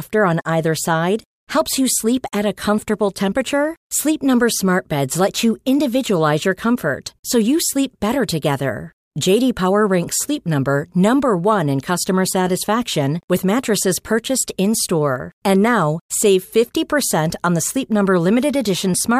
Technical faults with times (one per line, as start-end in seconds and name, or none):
12.17-14.17 Wi-Fi interference